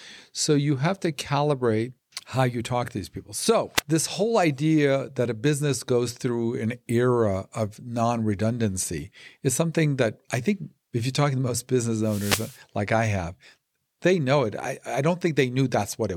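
Wireless microphone noise hits at 3.76–3.81 s and 12.0–12.6 s: the radio link fades, receiver static bursts out, a broadband smear on the spectrogram.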